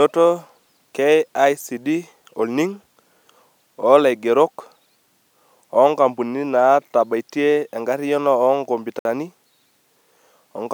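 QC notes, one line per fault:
8.99–9.05 s, Bluetooth stall: radio interference likely delayed packets, so the headphone buffer emptied and playback halted until the resent data arrived. The speech cuts abruptly to silence for 59 ms, then continues, leaving a brief hole in the audio.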